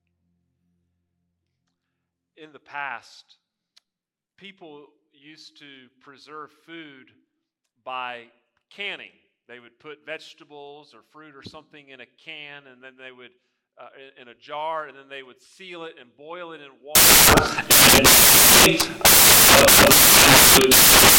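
From about 16.95 s to the end at 21.19 s, the audio turns into samples built from the wrong bytes. The bytes making up each sample are assembled incorrectly, so the rapidly fluctuating low-order bits land in the most significant positions. The result is loud, harsh broadband noise, close to white on loud sounds. A spectrogram shows a sudden jump to dense energy spread across all frequencies.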